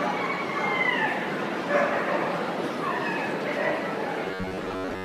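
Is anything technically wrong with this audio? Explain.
Yes. From 4.26 s to 5.04 s there is robotic sound from repeated short buffers. The sound takes on a rigid, metallic buzz near 93.8 Hz while still roughly following its original contour. The likely cause is new audio arriving too seldom, so playback fills the gaps by looping the most recent fragment, about 10.7 ms long, for most of that stretch. The real audio is skipped, and the loop's repetition rate becomes the fixed buzz pitch.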